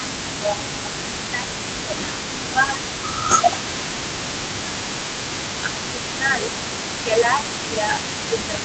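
A speech recording in which the talker's level repeatedly sinks and thins in three stretches, from 0.00 to 2.84 s, 3.24 to 6.50 s, and 7.00 s to the end. The deepest dips are around 10 dB, and the first two stretches lose roughly two seconds of level each. This is most likely speech suppressed in double talk. While both ends were talking, the echo canceller could not tell the near talker apart from loudspeaker echo and attenuated everything it picked up. Throughout the whole clip, a delayed copy of the speech trails the original by 214 ms, sitting roughly 10 dB below it. That points to an echo leak, likely a loudspeaker at the far end whose echo canceller failed to remove what its microphone captured, so the residue was sent back down the call. The call path's band limit, which tops out near 8 kHz, fits an Opus codec.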